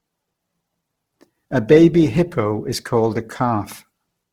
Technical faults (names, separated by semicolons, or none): Opus compression